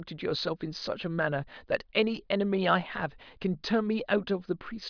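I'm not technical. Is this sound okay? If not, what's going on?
Yes, nothing wrong can be heard in this recording.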